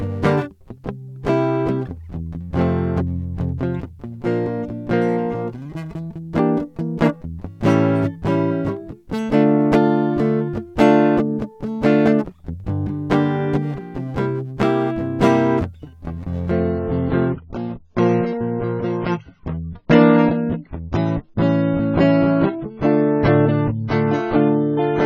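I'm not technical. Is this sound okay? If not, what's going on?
No. Adaptive stream at a lower bitrate, 16.5 s to the end: the connection slowed, so the player swapped to a smaller copy, suddenly dulling the music above 7 kHz.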